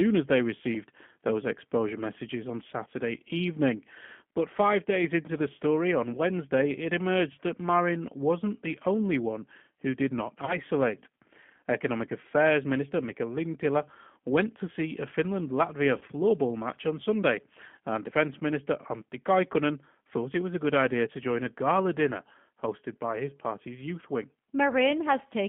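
Throughout, the speech carries the sound of the G.729 codec at 8 kbit/s. The signal sits in a telephone band of about 150 Hz to 3.4 kHz, so nothing above that survives. The codec rebuilds each short frame from a vocal tract model, a pitch predictor and a few pulses. That shortcut is plainly audible here. Voices come out rough, thin and slightly synthetic.

At 10.45 to 10.57 s, just after "one who did not", VoIP packet loss concealed by the speech codec breaks in. About 30 ms of audio is missing, which fits a single lost packet. The decoder stretches its last pitch and filter state and fades it down. This gives a brief stretched smear, and the sound stays weak as it recovers. The same thing happens at 15.98 to 16.04 s, right before "match on". It is shorter there but has the same stretched, dipping character.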